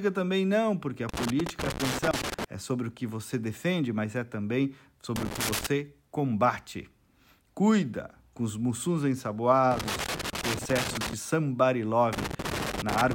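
Loose connector crackle breaks into this speech four times: from 1.09 to 2.44 s, 5.16 to 5.67 s, 9.71 to 11.13 s, and 12.13 to 13.13 s. Each burst is that irregular scratchy crackle you get when a worn or dirty contact keeps making and losing connection as something shifts, chopping the signal on and off. Any DC sitting on the line turns those breaks into pops on top.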